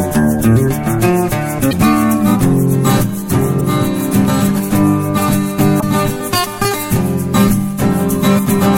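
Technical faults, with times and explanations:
1.69–1.73 s, 3.57–3.61 s, 5.79–5.83 s, 8.35–8.39 s: damaged data in a compressed stream. Corrupt frames make the decoder lose sync and search for the next frame header, giving a brief glitch in the music.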